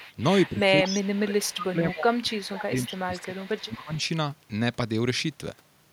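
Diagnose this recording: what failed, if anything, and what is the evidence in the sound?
The call processing at the far end likely let its echo canceller fall short: the loudspeaker sound its microphone picked up was not fully removed and came back down the line. The result is an echo leak, a delayed copy of the speech trailing it by 233 ms, at 0.00–0.14, 0.46–0.50, 0.84–1.11, 1.51–1.73, 2.11–2.63, 2.84–3.24 and 3.46–3.60 s. It sits between about 10 and 30 dB below the direct speech and is loudest around 0.84–1.73 s.

The same call processing stage also shows speech suppressed in double talk. With both sides talking, the echo canceller likely could not separate the local talker from the loudspeaker echo and turned the signal down as a whole. Between 0.51 and 3.98 s the speech repeatedly dips, by about 20 dB at its deepest, across roughly three seconds in total. It loses level in pieces while the leaking echo overlaps it.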